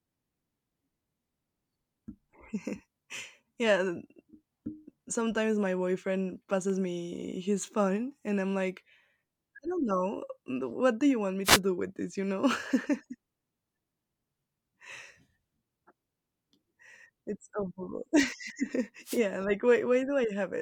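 Speech recording with two wireless microphone noise hits, from 11.44 to 11.60 s and from 19.04 to 19.21 s, each a brief swish of static lasting under a fifth of a second. Both come from the analogue FM radio link fading as reflected paths cancel the direct signal at the receiver. With the carrier weakened, receiver noise surges before the signal recovers.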